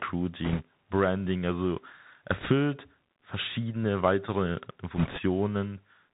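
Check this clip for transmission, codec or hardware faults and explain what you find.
Two faults are present: the whole clip passes through a Bluetooth headset codec, and three short bursts of link errors hit it.

Bluetooth CVSD headset codec, throughout: this coder sends a single up-or-down bit per sample and adapts its step size, so nothing above 4 kHz survives. The speech is plainly narrowband and sibilants sound scratchy over a granular hiss, which fits a 64 kbit/s CVSD link.

Bit errors on a Bluetooth voice link, at 0.44–0.62 s, 2.40–2.48 s and 4.96–5.20 s (right after "verschiedene weitere"): flipped bits disturb the delta stream, but each carries little weight and the error fades, so instead of clicks there is a rushing crackle. That crackle is strongest in the last burst, where the error rate sounds like about 3 percent against about 2 percent earlier. The low room noise beneath the speech belongs to the recording.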